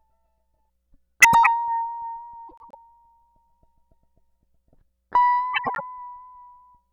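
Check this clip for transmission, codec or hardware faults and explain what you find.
The music has one transmission fault: frames out of order at 1.22–1.47 s, 2.48–2.75 s and 5.53–5.81 s. Two adjacent blocks of about 105 ms swap places. You hear a garbled flutter.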